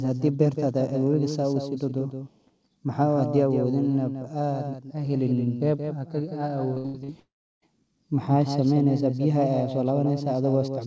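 Throughout the speech a second, full-band copy runs roughly 150 ms behind the original and about 10 dB quieter, with no decay or room colouring. It gives a flat, slapback-like echo, likely a doubled audio track from the same signal being captured again over a slower path.

From 6.74 to 7.10 s there is repeated packet loss with a robotic sound. Four gaps, the longest 80 ms, are each patched by extending the last sound. About 56% of the span is concealed, so the audio turns choppy, with pieces missing.

From 7.20 to 7.64 s comes a long network dropout, likely caused by no audio arriving at all. A brief concealment buzz fades out, then about 0.34 s of silence follows before the speech resumes with the lost portion gone. As on the rest of the G.722 call path, nothing is heard above 8 kHz.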